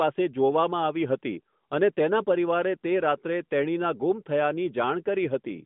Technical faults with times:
none

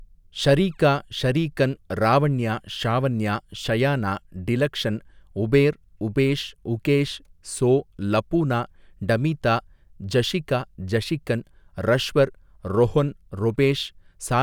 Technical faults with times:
none

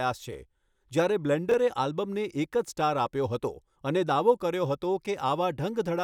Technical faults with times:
0.68-0.75 chunks out of order
1.49-1.54 chunks out of order

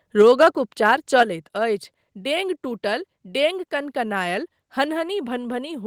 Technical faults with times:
0.20-0.48 microphone overload
0.85-1.22 microphone overload
1.23 microphone volume stepped down

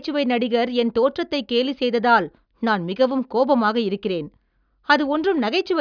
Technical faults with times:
none

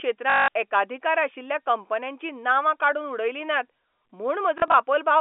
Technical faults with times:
0.30-0.48 packet loss with last packet repeated
4.58-4.74 packet loss with last packet repeated

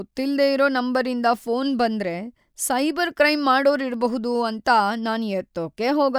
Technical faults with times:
none

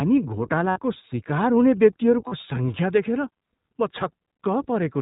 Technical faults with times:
0.00-5.01 iLBC codec
0.70-0.78 lost iLBC frames
2.27-2.33 lost iLBC frames
4.36-4.39 lost iLBC frames

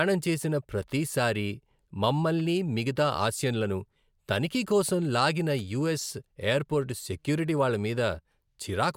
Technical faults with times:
none

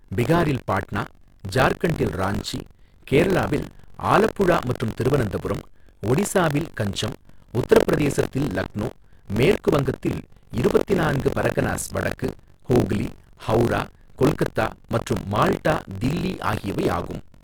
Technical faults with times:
0.00-17.44 buffer tearing

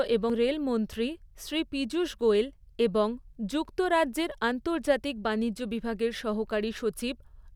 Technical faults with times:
0.30 compressed frames skipped

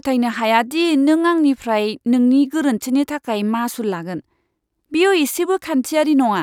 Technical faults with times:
none

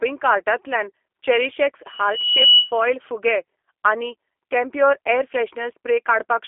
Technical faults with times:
0.00-6.47 G.729 codec
1.87-2.73 loudspeaker feedback squeal

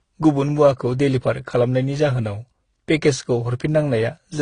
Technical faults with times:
0.00-4.41 transcoding between lossy codecs

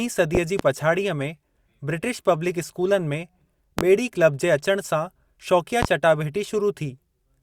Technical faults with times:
0.35-0.63 loud pop
3.79-3.82 loud pop
5.83-5.86 loud pop

